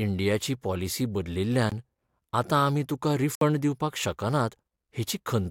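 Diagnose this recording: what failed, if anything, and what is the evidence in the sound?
Two abrupt dropouts cut through the speech: a brief hole from 1.70 to 1.72 s (about 23 ms) and a longer gap from 3.35 to 3.41 s (about 62 ms). Each is a block of digital silence, with the audio snapping to silence and back with no fade. The failure sits at the driver or buffer stage: most likely the output buffer wasn't filled in time. The first gap's length fits a 1024-sample buffer.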